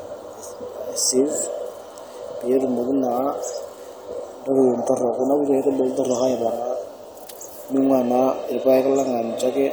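At 7.28 to 7.32 s, just before "ning'ua naa", a wireless microphone noise hit: the FM radio link fades briefly as reflections cancel, and receiver noise swells into a 36 ms swish of static over the speech, unlike a digital dropout's clean silence or click.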